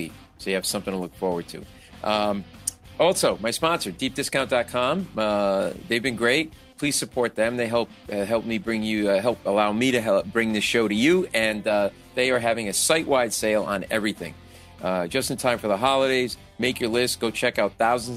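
No technical faults occur at any point in this audio.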